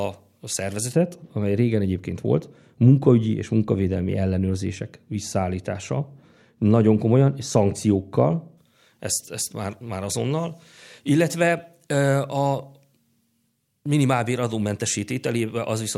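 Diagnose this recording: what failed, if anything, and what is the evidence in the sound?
From 0.93 to 8.58 s the speech turns dull and muffled. The treble falls away smoothly, about 11 dB down at 10 kHz relative to 1 kHz. It begins just before "ezt ezt már már". This is de-emphasis applied wrongly. A treble-cut filter ran on audio with no pre-emphasis to undo, or ran twice.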